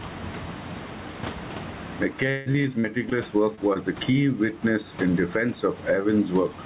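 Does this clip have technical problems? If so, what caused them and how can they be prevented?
Yes. Gain pumping runs through the whole speech clip: the background swells in pauses and drops by about 20 dB under each loud syllable. The likely cause is input gain set far too high, with a fast limiter clamping every peak. Lowering the microphone gain so the limiter rarely engages prevents it.

From 2.3 to 3.13 s there is repeated packet loss with a choppy, robotic sound. Five gaps totalling about 260 ms, the longest 158 ms, were patched by stretching the previous sound. A steadier network connection, or a larger jitter buffer, prevents it.

Short concealed packet loss causes brief smears at 3.55–3.59 s and at 3.73–3.77 s, just before "the key witness in". In each case, 20 ms of audio never arrived and was filled in from the preceding sound. Reducing network jitter and packet loss on the link prevents these as well.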